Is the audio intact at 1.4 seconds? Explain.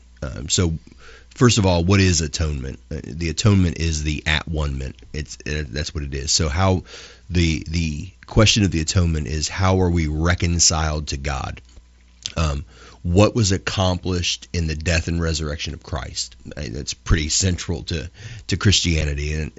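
Yes, at 1.4 seconds the speech is intact, with no fault in that moment.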